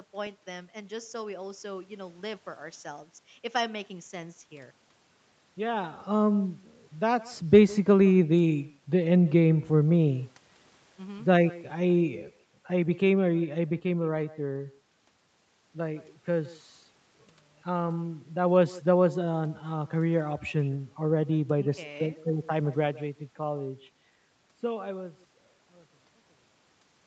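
Echo with no canceller runs through the whole of this speech recording. Every phrase is trailed by a quieter, thinner copy arriving roughly 150 ms later and about 22 dB down. The far end's loudspeaker played the talker's voice into its own microphone, and with nothing removing it, that pickup came back across the network round trip. The band stops at 8 kHz, as an Opus call path gives, and the ending fades smoothly out from around 24.5 s to 27.4 s.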